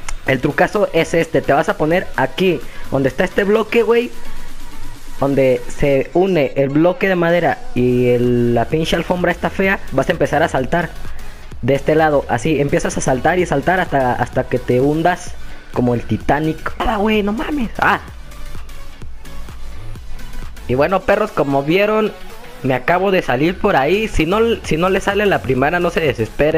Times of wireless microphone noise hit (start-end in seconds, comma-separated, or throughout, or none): none